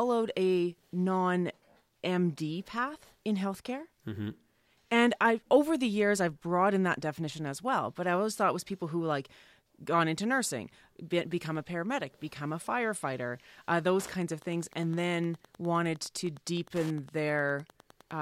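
At 13.93 s, right after "become a firefighter uh", Wi-Fi interference sets in and runs to the end of the speech at 18.22 s. A nearby Wi-Fi radio's beacon transmissions, repeating every 102.4 ms, are picked up and rectified by the audio circuitry, turning each radio burst into an audible click. The result is a steady ticking at roughly ten per second, sitting about 25 dB below the speech level.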